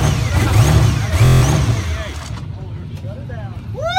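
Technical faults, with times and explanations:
1.25 to 1.42 s, system hang loop: the system stalled while the sound hardware kept replaying the same 23.2 ms slice, seven times over. Looping that fast turns it into a steady buzz at about 43 Hz, which fits a 1024-sample buffer, with practically no audio dropped.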